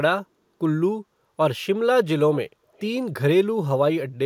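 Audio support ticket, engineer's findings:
Echo leak, 2.73 to 2.85 s in this speech clip. Faint delayed copy of the talker coming back about 324 ms late, very low, roughly 30 dB under the speech. Likely the far end's loudspeaker feeding its mic, with the echo canceller missing a short scrap and sending it back. Brief ghost rather than a sustained echo.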